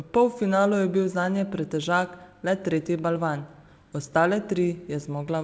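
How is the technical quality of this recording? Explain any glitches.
No glitches turn up here at all; it just sounds like an ordinary call line, with nothing above 8 kHz, which fits a wideband call codec such as G.722 running at 64 kbps.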